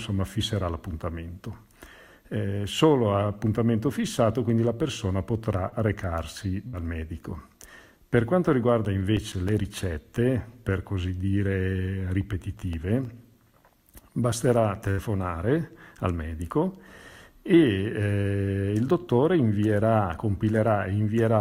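Short concealed packet loss at 5.69 to 5.74 s: about 20 ms of audio never arrived in time, so the decoder stretched the preceding sound across the hole for 22 ms and crossfaded back. It passes as a brief smear or wobble.

A burst of packet loss follows at 6.68 to 6.75 s, where 60 ms went missing. The receiver extended the last sound for 53 ms while fading it, so a held buzz or dying hiss stands in for the gap, and the audio resumes slightly ahead.

CD scratch ticks run from 8.53 to 9.80 s: nine regular ticks, about seven a second, the longest only a few milliseconds. Each marks a disc rotation where the blemish overwhelmed error correction and the player interpolated or muted the damaged samples. A second run of nine ticks at 12.42 to 13.68 s repeats the pattern with shorter ticks.

Another burst of packet loss at 14.91 to 15.00 s is the longest gap, with 80 ms lost and 70 ms of fading concealment heard in its place before the audio picks up further on.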